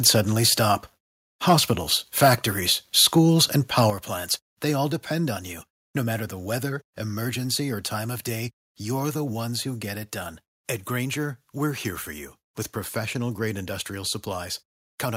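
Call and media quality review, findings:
Microphone overload at 0.06–0.16 s, 1.48–1.71 s, 2.21–2.34 s, 2.98–3.06 s and 3.78–3.82 s. Harsh crackle on the loudest peaks, about 3–5 dB over full scale, with a small share of samples flattened. Likely cause: mic input gain set too high, so the converter cuts off peak tops. Unlike codec distortion, the crackle is confined to peaks.

Microphone volume stepped down at 3.90 s, just before "plants they all". Sound and background both drop by about 7 dB in one step, right after the last clipped peak. Likely cause: call software cutting device input gain on detecting overload. A single clean step rather than pumping, so not a compressor or AGC ramp.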